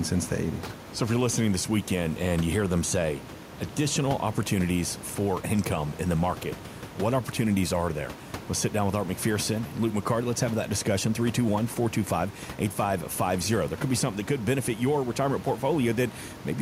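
Speech recording with no technical faults, only the room's own background noise sitting about 17 dB under the voice.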